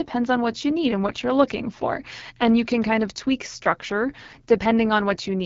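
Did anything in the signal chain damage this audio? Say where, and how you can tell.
Yes, at the codec stage: the AMR wideband (HD Voice) codec. Throughout, the speech sounds rough and raspy, with nothing above 7.5 kHz. That harsh texture, unlike a clean low-pass or a narrowband call, points to one of AMR-WB's lowest rates, around 8.85 kbit/s.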